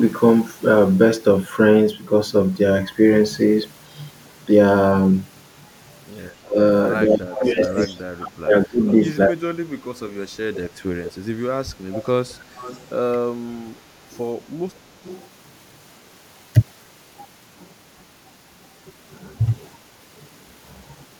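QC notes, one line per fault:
6.44–10.58 s and 11.50–14.52 s, speech suppressed in double talk: the talker's level dips in pieces, by as much as about 35 dB, totalling roughly 3 s in the first span and under a second in the second. Likely the echo canceller turning down both sides when the far end spoke simultaneously.
7.33–7.87 s, 11.03–12.86 s and 14.11–15.22 s, echo leak: a copy of the speech returns 229 ms late, at about 10, 15 and 20 dB below the direct signal respectively. Likely a loudspeaker-side echo canceller failing to remove all the pickup and sending it back.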